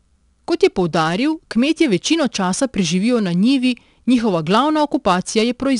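From start to finish the speech carries 4-bit ADPCM compression, plainly audible as a gritty hiss that rises and falls with the voice and roughens sharp onsets where the adaptive step lags behind sudden jumps. Each sample is coded as a coarse difference from a prediction, so the error tracks loudness. On a spectrogram, broadband noise fills the gaps between harmonics during loud syllables, and nothing appears above 10.7 kHz, which points to a stream of about 89 kbps.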